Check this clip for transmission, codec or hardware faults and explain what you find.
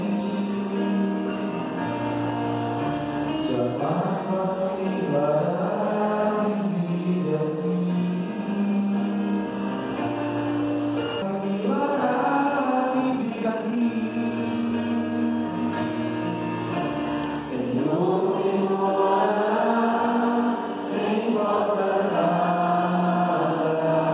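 There are two transmission faults, both clustered around the 11-second mark. The whole clip rides a telephone-band call path with nothing above 4 kHz, consistent with G.711 mu-law at 64 kbps, but that's just the channel.

Skip ahead, 11.22–11.24 s: playback jumps forward with essentially no gap. About a second and a half of audio is simply gone and the two sides butt straight together. That's what happens when the jitter buffer overflows after a delay spike and throws away a stretch of queued audio so it can catch up with what's already waiting. You hear it as an abrupt lurch with no silence or fill.

Jitter buffer speed-up, 11.32–14.82 s: right after the jump, the audio runs at about 124% speed, yet the pitch stays put. The buffer was still holding more than its target, so the receiver kept cutting out short chunks, a pitch period or a few at a time, over and over. Roughly a second in total was trimmed this way. 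For those three and a half seconds the sound comes across hurried and clipped in its timing rather than higher-pitched.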